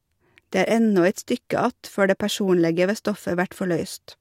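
No technical faults can be heard anywhere in this speech recording.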